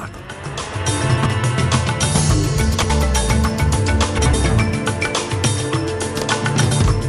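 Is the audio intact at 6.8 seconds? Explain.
No. From 6.60 to 6.82 s the frames are out of order: two adjacent blocks of about 0.1 s each, which fits four codec frames apiece, are swapped, giving a garbled flutter. Unlike a dropout or repeat, nothing is lost or duplicated.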